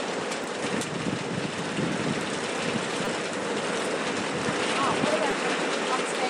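Repeated buffers at 0.44 s, 3.05 s (to 3.07 s) and 5.31 s: late data made the device replay a 5 ms block, heard as brief clicks or buzz.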